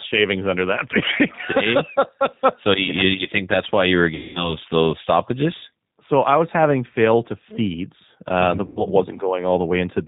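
Speech runs through a G.729 codec for its whole length, and the damage is plainly audible. Nothing above 4 kHz survives, and the voice has the slightly rough, synthetic grain of speech rebuilt from a vocal tract filter, a pitch predictor and a few pulses per frame. That sound fits an 8 kbit/s low-delay codec. It differs from a plain low-pass filter or a wideband codec at a low bitrate because the whole voice is resynthesized, with a buzzy, pulse-driven texture and not just a dull top end. VoIP packet loss concealed by the speech codec hits twice. From 4.15 to 4.56 s, after "that's why you were" and before "those stoppages", about 200 ms of audio is missing. At 8.66 to 8.84 s, about 100 ms is gone. In each gap the decoder stretches its last pitch and filter into a fading buzzy tone or coloured noise. The voice then stays weak or smeared briefly after audio returns, because each frame builds on the previous one. 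That lingering recovery separates it from a hard dropout or a clean silence gap.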